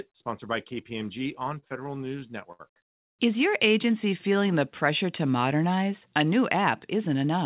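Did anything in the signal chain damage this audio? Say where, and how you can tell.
Yes. Network and jitter buffer: repeated stalls (stutter) from 1.6 to 2.61 s. Eleven gaps, up to 69 ms each, are bridged by stretching the last sound. About 190 ms is filled and nothing is lost.

Jitter buffer slow-down from 3.85 to 4.6 s, just before "pressure to modernize". Repeated pitch periods add 66 ms, so the speech runs at 92% speed at unchanged pitch.

Jitter buffer speed-up from 6.93 to 7.38 s. Trimmed pitch periods remove about 50 ms, so the speech runs at 108% speed and sounds hurried. The narrowband call path audibly stops at 4 kHz.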